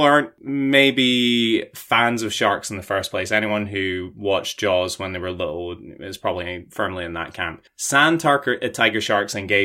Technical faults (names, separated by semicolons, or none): sample clock jitter